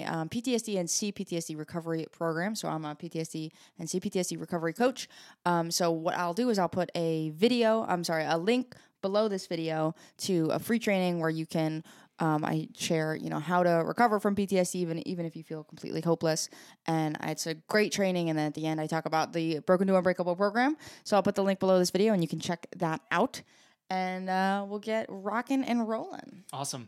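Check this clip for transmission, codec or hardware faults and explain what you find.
No transmission, codec or hardware faults can be heard anywhere in the speech; the signal holds steady throughout, without any break, distortion or disturbance attributable to the channel or equipment.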